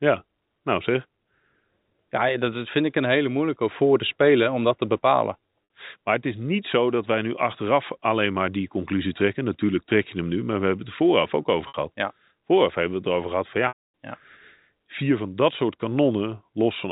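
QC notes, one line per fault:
5.64–5.70 s and 11.68–11.74 s, packet loss with pitch repetition: about 60 ms of audio was lost each time, after "om dat te bepalen" and after "het vooraf ook over", which fits a run of three 20 ms packets. The receiver bridged each hole by looping the last pitch period it had, so the sound briefly hangs on a held, slightly buzzy tone before normal audio picks up again.
13.68–13.77 s, packet loss with pitch repetition: a longer loss of about 260 ms follows "het erover gehad van", pointing to roughly thirteen consecutive packets going missing. The repeated pitch period can't stretch that far, so the buzzy held tone fades out over about 50 ms into silence, and the speech returns through a short cross-fade, heard through the band-limited telephone sound of the G.711 A-law path.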